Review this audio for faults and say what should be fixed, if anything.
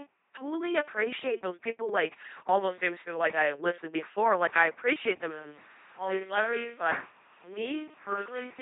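LPC-10 vocoder, throughout the clip: the speech has the buzzy, mechanical robot quality of a very low-rate vocoder, and nothing is present above 3.7 kHz. This character suggests a 2.4 kbit/s coder. It replaces the real voice with a ten-pole vocal-tract filter excited by either a pulse train or noise, so every instant is forced to be fully voiced or fully unvoiced. The damage is heavy. To prevent it, route the recording through a modern wideband codec at an adequate bitrate rather than a legacy military vocoder.

Switch to a distant microphone, from 5.33 s to the end, right after "I appreciate them": the voice abruptly turns roomy and hollow, with thinner bass. The level falls by about 5 dB, and room noise rises to roughly 25 dB below the speech. This points to the close microphone's signal likely dropping out, leaving a farther pickup such as a camera mic to carry the rest. To prevent it, secure and monitor the close microphone so its feed stays live for the whole take.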